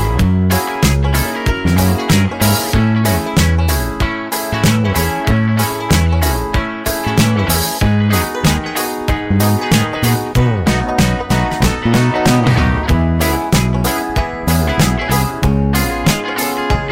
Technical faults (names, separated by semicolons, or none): hard clipping